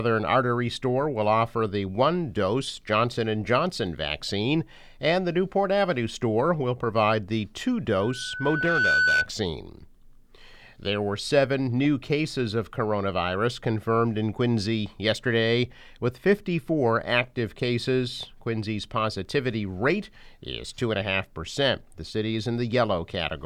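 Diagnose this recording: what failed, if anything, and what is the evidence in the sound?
The failure is a loudspeaker feedback squeal in the acoustic path between loudspeaker and microphone. From 8.00 s to 9.29 s a single 1.5 kHz tone swells over about a second to roughly 5 dB above the sound. The loop's gain exceeded one at that frequency, so it reinforced itself.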